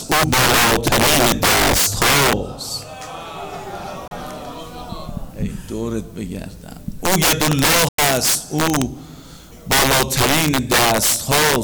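The audio suffers integer overflow throughout: loud peaks, driven about 10 dB past full scale on several percent of samples, wrap to the opposite sign, giving violent cracks far harsher than the flattened buzz of clipping. A digital broadcast dropout mutes the sound from 4.08 to 4.12 s and again from 7.88 to 7.99 s. Each cut fades out in about 3 ms rather than clicking like a splice, and the content is lost rather than delayed. The 32 ms and 96 ms lengths fit one and three lost frames.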